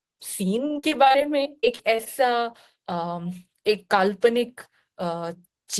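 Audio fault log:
0.67–2.08 s, repeated packet loss (robotic sound): the audio breaks up into a rapid run of short dropouts, about a dozen or more holes, the longest around 40 ms. Each hole is bridged by stretching the preceding sound, roughly 0.3 s of patched audio in total, about a fifth of this span. Because one repeated fill follows another before the signal recovers, the result is choppy, with pieces missing, over a 12 kHz call-codec band.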